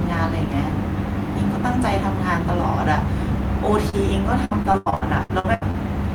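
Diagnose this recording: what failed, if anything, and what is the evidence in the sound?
Network trouble first: short concealed packet loss at 3.89 to 3.95 s. The decoder stretched the last sound over a 20 ms hole, leaving a brief smear.

Then repeated packet loss (robotic sound) from 4.45 to 5.76 s. Back-to-back gaps up to 87 ms get patched over, so it turns choppy, with pieces missing.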